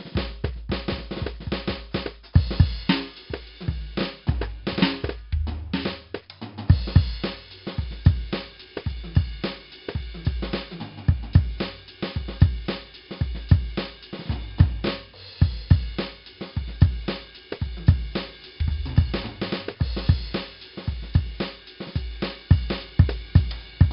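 A music clip carrying heavy 4-bit ADPCM compression throughout: each sample is coded as a coarse step from a prediction, so a gritty hiss rides on every loud passage and attacks smear where the step size lags. Nothing survives above 5.3 kHz, pointing to a low sample rate and a stream near 44 kbps. A spectrogram shows a hard ceiling at 5.3 kHz with level-following noise filling the band beneath; the waveform looks grainy on peaks.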